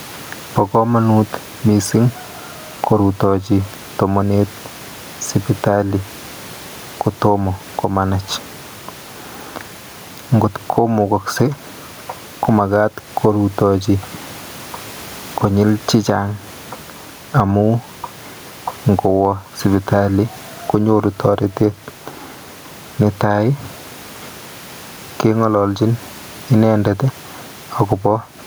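Right through the recording there's gain pumping. The room noise sits about 34 dB below the speech, and the gain gets yanked down every time the talker gets loud, a swing of roughly 15 dB. The likely cause is microphone gain set far too high with a fast limiter or compressor clamping each peak. The result is squashed speech with loud and quiet parts pressed close together.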